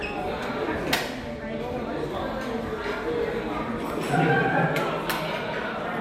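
Everyday sounds, with no technical faults to be heard.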